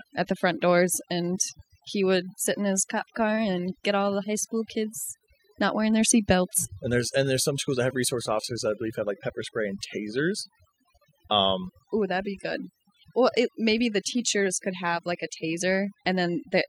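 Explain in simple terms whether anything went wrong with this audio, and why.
Something did go wrong here. The speech has overdone noise removal, and it lasts the whole clip. A noise reduction tool was pushed too hard. It switches off bits of the sound that it mistakes for background noise, and the quiet parts of the voice get cut too. So the gaps between words sound quieter, with twinkling specks.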